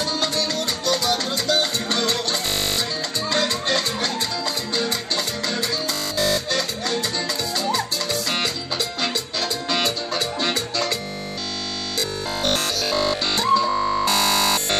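From 2.46 to 2.78 s, 5.93 to 6.39 s, 11.02 to 13.44 s and 13.69 to 14.79 s, the sound takes on a robotic quality, a rigid metallic 50 Hz buzz that loosely tracks the underlying audio. The likely cause is repeated short buffers: with new audio arriving too seldom, a segment of about 20 ms is looped, so 50 Hz is imposed as a fixed pitch. Essentially all of the material in these spans is repetition.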